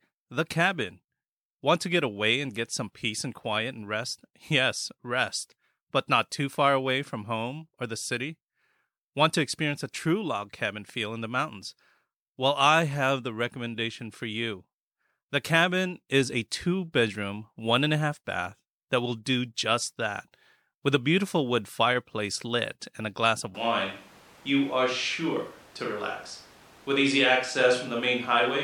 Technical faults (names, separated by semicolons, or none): switch to a distant microphone